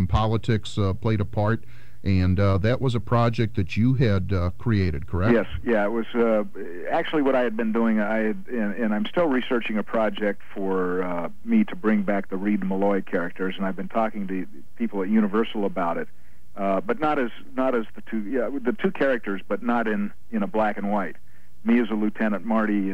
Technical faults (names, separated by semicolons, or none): none